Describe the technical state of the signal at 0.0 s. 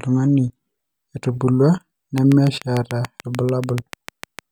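At 0.0 s the signal is intact, with no audible technical fault at that moment.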